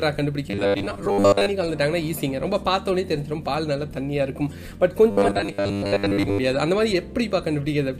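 Two stretches of robotic sound from repeated short buffers occur, from 0.50 to 1.51 s and again from 5.10 to 6.38 s. In both, the audio turns into a rigid, metallic buzz with a fixed pitch of 100 Hz that only loosely follows the underlying sound, and most of the original material is missing. The likely cause is audio arriving too seldom, so playback loops the most recent chunk to fill the gap. A 100 Hz repeat rate fits a chunk of about 10 ms.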